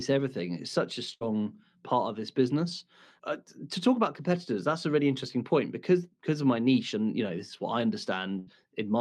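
Bursts of packet loss follow "such a" (1.13–1.23 s) and "this is what I" (8.39–8.49 s). About 80 ms drops out each time, replaced by a held, fading sound that shows as a smeared, decaying band on the spectrogram.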